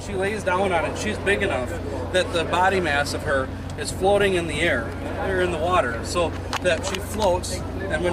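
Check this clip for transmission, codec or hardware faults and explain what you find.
No transmission, codec or hardware faults are audible anywhere in the clip.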